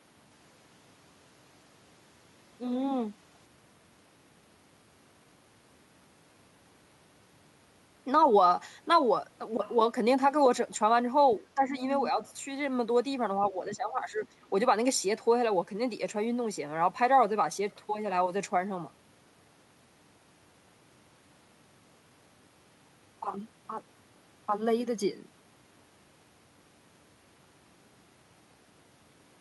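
From 11.4 to 11.8 s the speech dips by around 10 dB, for a couple of hundred milliseconds in total. This is speech suppressed in double talk: with both ends talking, the echo canceller likely could not tell the local talker from loudspeaker echo and attenuated both.

At 11.96 to 12.04 s a brief scrap of the other side's voice leaks through, roughly 15 dB below the speech. The likely cause is residual loudspeaker echo that the canceller left in the microphone signal.

The same suppression returns at 13.51 to 14.25 s, again with drops of around 10 dB, affecting about 0.7 s of speech as the canceller likely pulls the level down during overlap.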